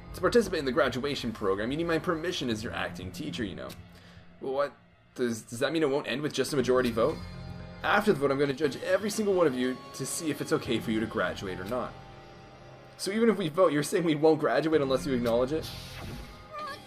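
At 8.51 to 8.64 s and again at 13.49 to 13.54 s, the sound abruptly dips by about 6 dB. This is likely one channel dropping out, and it shows as a sudden rectangular notch in the waveform envelope and as uniformly fainter spectrogram bands.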